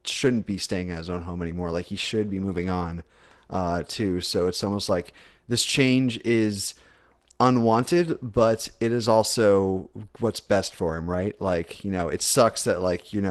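At 4.61 to 4.67 s, just before "like this change is", and again at 11.95 s, there is a lost packet rebuilt from error correction. No gap is heard. A low-bitrate copy fills in. The first patch, about 40 ms, fits two packets. The second is about 20 ms. Both sound briefly rougher and noisier.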